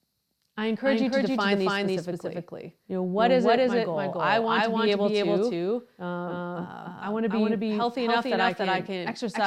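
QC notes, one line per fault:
Throughout, doubled audio track. A dry copy of the speech trails about 300 ms behind at equal level. Likely from a slower second capture path.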